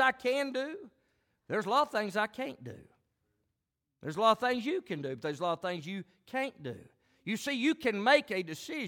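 No audible technical fault turns up anywhere in this recording of speech.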